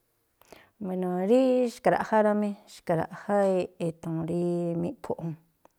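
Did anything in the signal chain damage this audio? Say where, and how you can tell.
No, nothing along the way seems to have harmed this speech recording, and there's nothing in it I'd trace back to any stage of the chain.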